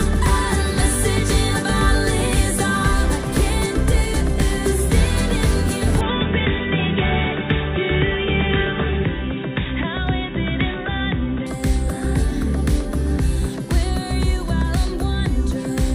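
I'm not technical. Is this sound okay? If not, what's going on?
No. Input switched to a poorer device from 6.01 to 11.47 s: the sound turns dull and boxy, with nothing above 3.8 kHz, likely because a lesser microphone took over.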